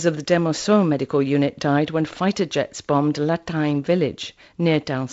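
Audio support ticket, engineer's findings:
No fault found: wideband speech band-limited to about 7.7 kHz, consistent with a G.722 telephone path working as designed, with light coding noise in the lower band that fits its 48 kbit/s mode.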